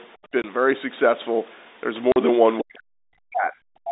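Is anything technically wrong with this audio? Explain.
Yes, there are two kinds of fault.

Packet loss filled with silence occurs at 0.42 to 0.44 s and 2.12 to 2.16 s. Audio packets never arrived, and the receiver played silence in their place. The resulting 20 ms and 40 ms holes, consistent with losing one and then two 20 ms packets, cut the speech abruptly.

The second fault runs from 2.61 s to the end of the clip, for roughly a second in total. The talker's speech sinks unevenly, at its deepest by around 40 dB. This is likely speech suppressed in double talk: the echo canceller, unable to separate this talker from the far side's loudspeaker echo while both spoke, attenuated everything.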